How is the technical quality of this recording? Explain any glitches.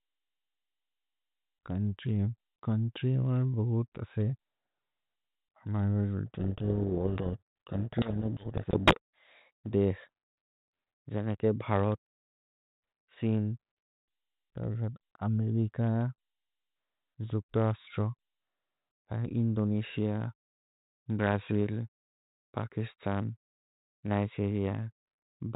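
The speech runs through G.726 ADPCM at what sounds like 32 kbit/s, so it's band-limited to telephone range with light coding grain, and there's one real glitch.

From 6.28 to 9.73 s there's a codec payload misread. The two ends disagree on the bit order inside each G.726 code word, so the decoder takes every sample's difference value from scrambled bits and rebuilds the wrong waveform. You hear the speech buried under harsh, gritty distortion for those three and a half seconds, and it clears once the bit order lines up again.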